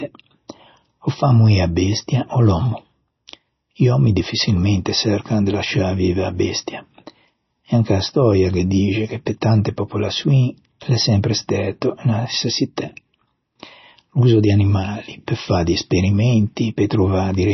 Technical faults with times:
0.00-17.54 MP3 compression

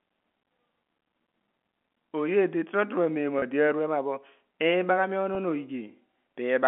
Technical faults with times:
3.39-3.42 packet loss with pitch repetition
5.35 packet loss with pitch repetition

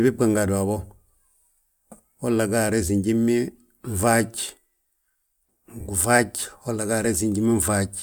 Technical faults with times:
none

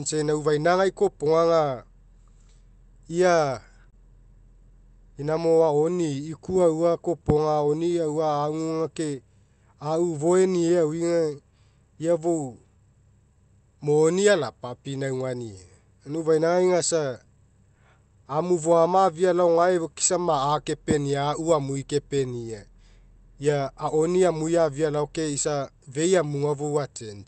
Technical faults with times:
0.00-27.27 clock drift between sender and receiver
0.01-27.07 repeated timing corrections
3.90-3.96 short stall from a late packet

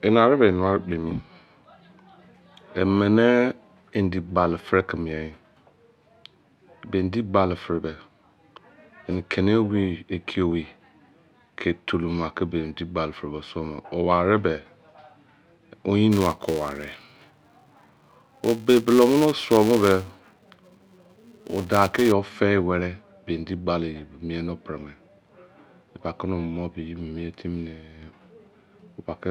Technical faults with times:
16.12-22.12 filter restarted on every block

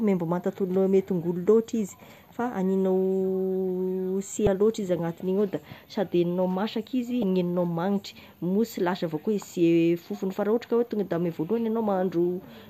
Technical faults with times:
4.44-4.47 damaged data in a compressed stream
7.20-7.23 damaged data in a compressed stream

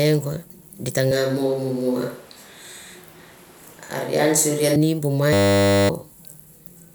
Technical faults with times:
1.11-4.76 switch to a distant microphone
5.33-5.89 system hang loop

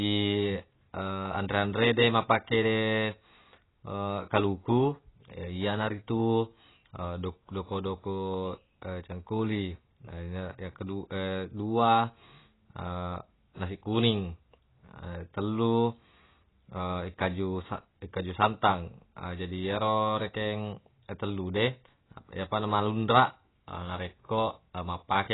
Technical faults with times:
0.00-25.34 AAC compression

